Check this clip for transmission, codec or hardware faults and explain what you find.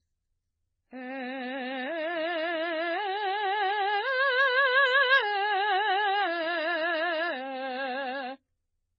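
The music carries one fault throughout the clip, transcoding between lossy codecs. Nothing is heard above 7.3 kHz, leaving the top end dull. Smeared, warbling highs from an MP3 encode sit alongside the swirly, synthetic shimmer of HE-AAC band replication, with a further AAC-LC layer over both. This is likely a chain of low-rate encodes, pointing to about 16, 20 and then 32 kbit/s, each re-encoding the earlier artefacts and adding its own, while the lowest cut-off persists.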